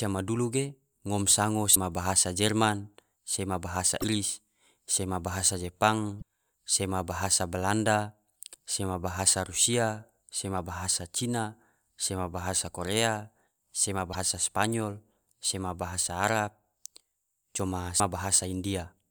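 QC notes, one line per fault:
1.71–1.76 s, 3.99–4.04 s, 6.18–6.22 s, 14.10–14.15 s and 17.96–18.00 s: damaged data in a compressed stream. Five brief disruptions of about 40 to 60 ms each. The first falls between "madulu ge ngom sango" and "bahasa jerman sema". In each, corrupted frames lose decoder sync, so the decoder misreads or drops them before resyncing at the next valid frame header.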